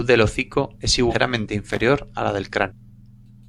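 Just after "del hocico es", around 1.09 to 1.14 s, the speech jumps forward, which is compressed frames skipped. Something like half a second of audio never gets played, and the gap fits roughly ten frames of about 46 ms each that were missing or thrown out by the decoder as damaged. It happens again at 2.67 to 2.71 s, losing roughly 0.4 s, around seven frames.

Between those, from 1.71 to 1.81 s, there's a short burst of loose connector crackle: an irregular scratchy, crackly patch. That's what you get from a worn or dirty contact rapidly making and breaking as it shifts, chopping the signal into fragments, with pops added wherever the line carries any DC.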